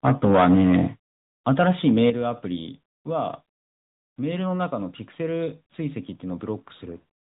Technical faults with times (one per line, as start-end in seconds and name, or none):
0.00-7.25 AMR narrowband mobile codec
1.48-2.10 microphone overload
2.10 microphone volume stepped down